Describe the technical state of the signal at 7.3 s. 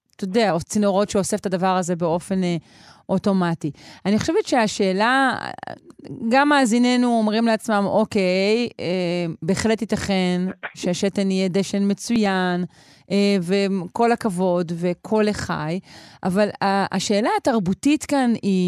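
At 7.3 s the speech signal is intact, with no audible fault at that moment.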